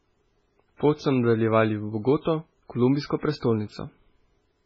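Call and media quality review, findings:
MP3 compression across the whole clip: speech sounds watery and swirly, nothing above 7.6 kHz. Likely a starved MP3 encoder; the heavy damage fits a bitrate around 16 kbps. It's chopping the top band and flickering weak frequency lines frame to frame.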